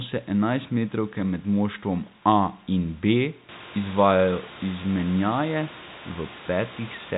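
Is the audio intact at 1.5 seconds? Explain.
Yes, the audio is intact at 1.5 seconds, with no dropout, click or other fault at that point.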